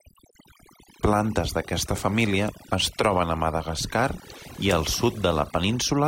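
Overdone noise removal runs through the whole speech recording. The noise reduction was set too aggressively, so every frequency band sitting close to its noise estimate gets pulled far down or switched off entirely. The quieter components of the voice fall below that threshold and vanish along with the noise. What is left is a lowered background scattered with twinkling, glassy specks.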